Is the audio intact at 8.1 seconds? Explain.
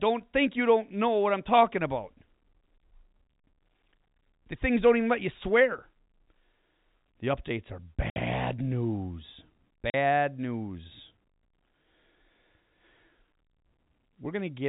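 No. Just after "updates are", packet loss filled with silence cuts the sound from 8.10 to 8.16 s. The receiver played silence for a 60 ms gap, which fits three 20 ms packets, giving a hard-edged dropout. It shows as a flat waveform and a blank vertical band on a spectrogram.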